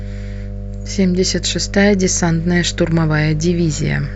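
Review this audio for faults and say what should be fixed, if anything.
There's mains hum running under the whole speech clip: a steady 50 Hz tone from a ground loop or nearby transformer, only about 10 dB below the voice. Fix the grounding, use balanced cables, and keep the chain away from power supplies.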